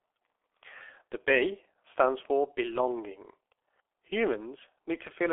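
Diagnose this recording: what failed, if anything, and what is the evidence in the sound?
The failure is at the codec stage. The speech carries heavy G.723.1 codec damage throughout. The spectrum stops dead above 3.8 kHz, inside a telephone band of 300 Hz to 3.4 kHz, so the speech sounds muffled. Consonants smear and the voicing turns hoarse because the codec encodes in 30 ms frames and refreshes its model of the vocal tract only slowly. The degree of damage fits a very low rate near 6 kbit/s.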